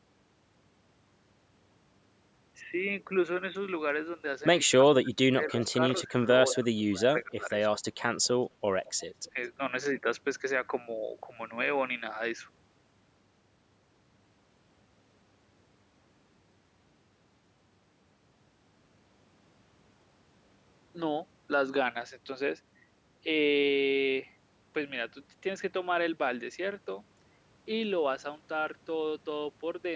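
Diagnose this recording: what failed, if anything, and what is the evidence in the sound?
Call processing stage, speech suppressed in double talk. Between 4.7 and 7.85 s the speech dips in pieces, roughly 1.5 s in total, up to about 25 dB down, with a brief 10 dB dip at 9.31–9.37 s. This is likely the echo canceller mistaking overlapping talk for echo and attenuating both.

Call processing stage, echo leak. Short delayed copies of the speech appear at 5.59, 6.5, 8.85 and 9.24 s, each lagging about 211–214 ms and sitting about 10 to 35 dB below the speech. This is likely loudspeaker pickup that the far-end echo canceller failed to fully remove.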